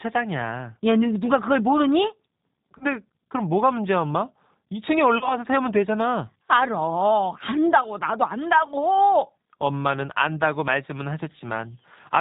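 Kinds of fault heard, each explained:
G.729 codec: Throughout the speech, the audio has the slightly rough, synthetic character of a low-rate codec that rebuilds the voice from a vocal tract filter, a pitch predictor and a few pulses per frame. This fits the G.729A variant at about 8 kbit/s, and the damage is plainly audible. On a spectrogram, all energy stops at a hard ceiling near 4 kHz, and the harmonics look grainy and smeared rather than cleanly striped.
VoIP packet loss concealed by the speech codec: At 2.78 to 2.86 s and again at 5.18 to 5.34 s, about 30 ms of audio went missing each time, which fits a single lost packet. The decoder filled each gap by continuing its last pitch and filter at falling gain. This is heard as a short stretched sound, a buzzy tone or coloured noise, that fades, with the voice staying weak briefly afterwards because each frame builds on the one before. 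A waveform shows the stretched sound under a shrinking envelope. A spectrogram shows a frozen spectrum dimming out.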